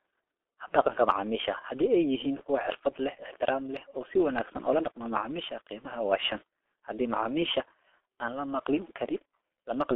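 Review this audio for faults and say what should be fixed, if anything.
The whole clip carries heavy G.723.1 codec damage: speech is squeezed into 300 Hz to 3.5 kHz and sounds muffled and hoarse, with smeared consonants, which fits a rate near 6 kbit/s. To prevent it, route or record through a wideband codec at a higher bitrate.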